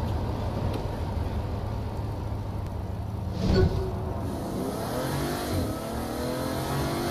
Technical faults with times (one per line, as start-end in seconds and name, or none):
2.67 audio missing between chunks